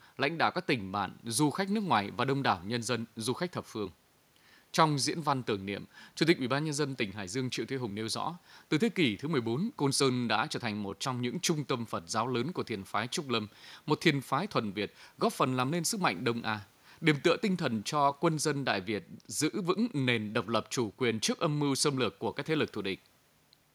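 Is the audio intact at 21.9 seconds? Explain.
Yes, the audio at 21.9 seconds is intact, with no audible fault at that moment.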